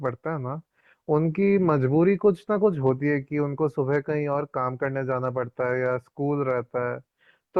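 Listening to the speech, nothing stood out as a technical fault at any point.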